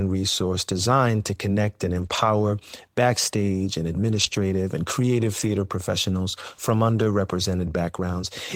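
At 1.93 to 2.27 s, after "designed to connect and", the speech turns rough and noisy but never drops out. This is a lost packet rebuilt from error correction. Packets went missing, and the decoder played low-bitrate copies carried in the following packets. It happens again at 4.07 to 4.37 s, after "backstage and", and briefly at 5.39 to 5.49 s, between "and creative" and "professionals from". The rebuilt stretches suggest roughly 180, 160 and 60 ms of audio.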